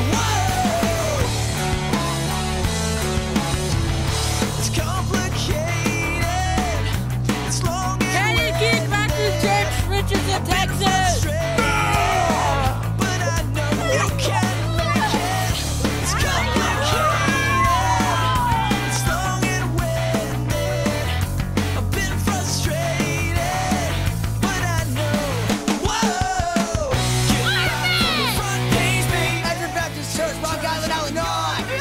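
No technical faults can be heard anywhere in the recording. Nothing in the sound points to a broken stage in the chain that produced it.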